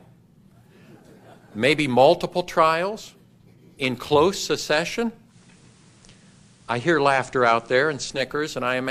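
From 5.24 to 8.24 s, digital radio blends to analogue FM over 132 ms. Faint hiss enters and level shifts about 1 dB.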